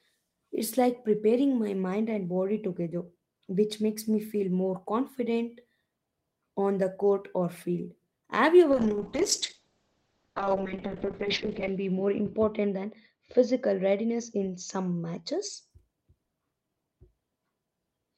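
A call bitrate drop hits this speech clip from 8.72 to 15.76 s: the bandwidth estimate collapsed and the encoder was starved of bits, consistent with a fall from 32 to 6 kbps. Coarser coding makes the speech rough and watery, the top end shrinks from 20 kHz to 8 kHz, and the worst stretch lasts 1.72 s.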